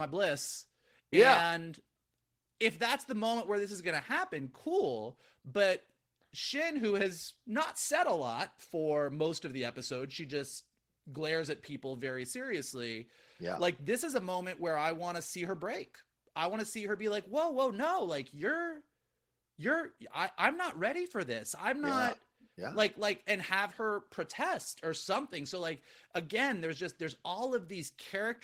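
Listening closely to the speech in this recording, nothing stood out as a technical fault at any point.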